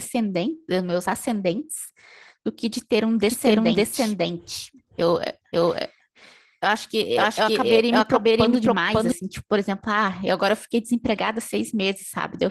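Opus voice compression runs through the whole clip. The speech is coded by linear prediction with a thin layer on top for the upper band, and the coarsely coded excitation leaves it plainly muffled, hoarse and slightly robotic, which fits a low bitrate of around 16 kbps.

A doubled audio track appears from 3.30 s to 9.12 s. A second full-band copy of the speech, about as loud as the original, trails it by about half a second with no reverberant tail. It starts and stops abruptly, likely from a second capture taken by a slower path.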